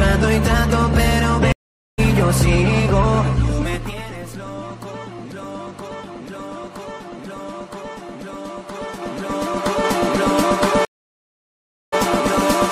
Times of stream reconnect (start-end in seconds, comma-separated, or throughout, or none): 1.52-1.99, 10.85-11.99